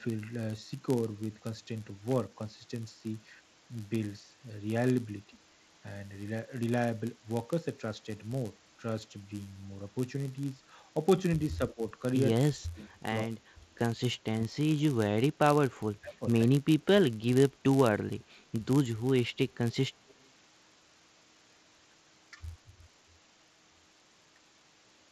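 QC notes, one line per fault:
Throughout, block size mismatch (padded): one stage writes shorter blocks than the next reads and zero-fills the rest, so a 99.6 Hz buzz runs under the speech, which plays 0.4% slow.
11.58–11.84 s, 12.34–12.96 s, 13.23–13.66 s, 14.13–15.45 s, 16.00–16.26 s, 16.60–16.66 s, speech suppressed in double talk: the echo canceller likely clamped down while both sides spoke, so the speech dips by roughly 15 to 30 dB or drops out in pieces.
20.09–20.14 s, echo leak: loudspeaker pickup likely slipped past the echo canceller, leaving a faint delayed copy of the speech 159 ms behind, roughly 35 dB below it.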